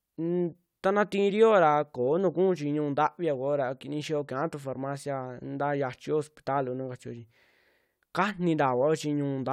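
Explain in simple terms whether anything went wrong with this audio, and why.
Nothing went wrong with this bit of speech; there's nothing here that sounds like a technical fault, so it's fine to relax.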